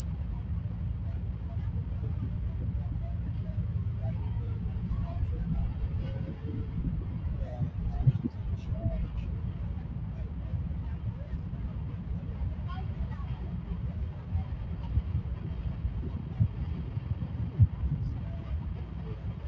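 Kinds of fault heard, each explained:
Noise suppressor applied to music or sounds: a speech-tuned suppressor stays on throughout, treating sustained sounds and tails as noise, so they dip by roughly 5 dB and pump.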